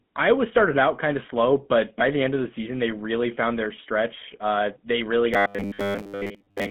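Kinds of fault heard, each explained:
GSM full-rate codec: The speech has been squeezed through the original GSM full-rate codec, which suits its 13 kbps rate. The codec rebuilds the voice from a vocal-tract model driven by a sparse, regularly spaced pulse excitation, and the line band keeps roughly 150 Hz to 3.4 kHz, with nothing above 4 kHz. The result is a narrow, telephone-thin sound with a plainly audible buzzy, gravelly roughness running through the whole clip.
Robotic sound from repeated short buffers: From 5.34 s to the end, just after "they really", fresh audio stops arriving in time, likely from a starved playback buffer. The player fills the gaps by looping a short slice of recent sound, and most of what is heard is these repeats rather than new audio. That loop imposes a fixed 100 Hz buzz, which fits slices about 10 ms long, so the voice turns into a rigid metallic drone that only loosely tracks the words.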